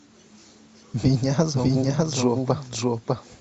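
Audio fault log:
Throughout: doubled audio track. A second full-band copy of the speech trails the first by roughly 0.7 s at about the same loudness, with no decay or room colour, so everything is heard twice. This likely comes from a slower capture path or misaligned edit.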